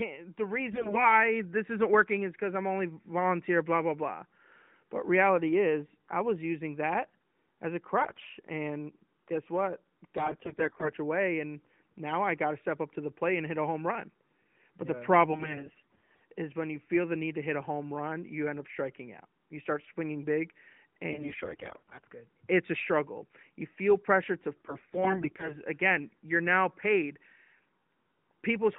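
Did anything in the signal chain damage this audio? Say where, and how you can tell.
Yes. AMR bit errors on the mobile network link flipped weakly protected bits, so pulse positions and fine pitch, gain and spectrum values decode wrongly. The speech keeps its pitch and level but turns hoarse and gargly at 0.72–1.06 s (before "this isn't working is"), 8.00–8.26 s, 10.18–10.90 s (after "guess what"), 15.30–16.22 s, 21.12–22.04 s and 24.56–25.59 s (after "feel pressure to").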